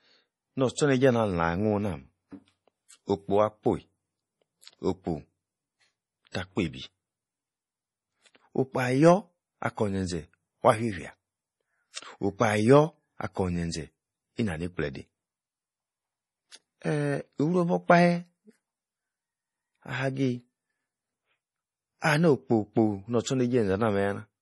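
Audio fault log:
Throughout, MP3 compression: the speech sounds watery and swirly, with chirpy metallic s sounds and smeared consonant onsets, and nothing above about 11.5 kHz. Likely a heavily starved encode near 32 kbps, cutting the treble and dropping weak frequency lines frame to frame.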